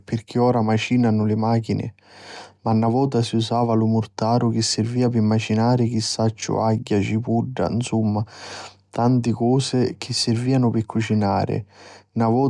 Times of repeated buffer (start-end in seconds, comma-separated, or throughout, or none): none